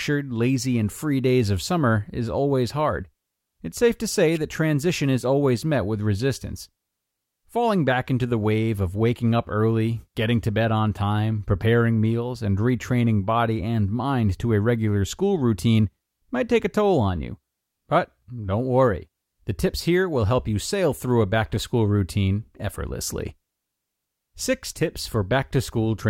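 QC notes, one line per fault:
4.35 s, electrical switching spike. A sharp snap sits on top of the speech just after "safe to say," peaking around -25 dBFS. Its brief, tight burst of clicks is likely an arc from a nearby switch or motor picked up by the audio line.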